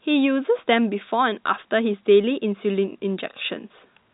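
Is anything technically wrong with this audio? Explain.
No, nothing is technically wrong.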